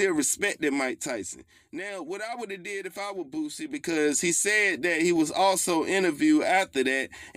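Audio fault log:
0.65–1.58 s and 3.62–3.99 s, zipper noise: a ticking zip rides on the sound, first as the level drops about 10 dB at roughly five ticks a second, then as it rises about 10 dB at roughly fifteen. Each tick is an unsmoothed 2 dB gain step.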